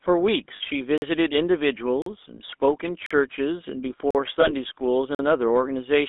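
Throughout, the speech has a buzzy, gravelly roughness and a narrow, boxy tone, with nothing below about 250 Hz or above about 3.6 kHz. This is the GSM full-rate codec, and the damage is plainly audible. The codec rebuilds speech from a vocal-tract filter driven by a coarse, regularly spaced pulse excitation, and that excitation loses fine detail, which fits a 13 kbps GSM stream.

From 0.56 to 0.61 s the sound freezes into a short, rough metallic ring instead of moving on. These are lost GSM frames. About 40 ms went missing, which points to two 20 ms frames, and the decoder covered the hole by repeating the last good frame's settings, so one moment of sound is smeared across the gap.

At 0.98, 2.02, 3.06, 4.11 and 5.15 s the speech cuts to silence for about 43 ms each time. This is a gap between chunks. The audio was delivered in 1 s pieces and silence was inserted at every join, probably from codec padding or a player starting each piece late. 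The holes land with steady, regular spacing and interrupt the sound, but no speech is removed.

From 4.41 to 4.51 s there is a second brief metallic smear. This is another case of lost GSM frames. About 20 ms is missing, consistent with a single lost frame, and the repeated frame fills the gap with a ringing copy of what came just before.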